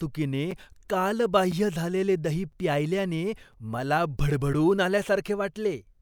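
The speech was delivered in chunks of 1.0 s, and a gap was left between chunks at each of several joins instead of running them together seamlessly. The result is three clean holes of about 6.5 ms at 0.51 s, 2.52 s (just before "प्यायल्याने मला") and 3.53 s. Each sounds like a brief hard-edged dropout, a short hole in the speech, with nothing lost on either side.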